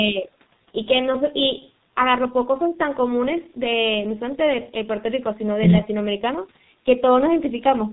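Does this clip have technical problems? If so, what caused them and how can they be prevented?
Yes. Throughout the speech, the signal was squeezed through the G.723.1 codec at 6.3 kbit/s, which models the voice in coarse 30 ms frames and discards everything above 4 kHz. The damage is heavy: speech sounds muffled and hoarse, and consonants smear together. Using a wideband codec at a higher bitrate for the call would prevent this.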